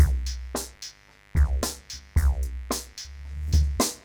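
A switching source such as a dimmer or rectifier, or a gap in shielding, is letting sharp spikes from the 50 Hz mains into the signal path for the whole clip, two per mains cycle. This mains buzz sits roughly 30 dB below the wanted sound. Because the spikes are so abrupt, their harmonics of 50 Hz stretch up into the several-kilohertz range, so instead of a smooth low hum there is a constant, raspy buzz underneath everything.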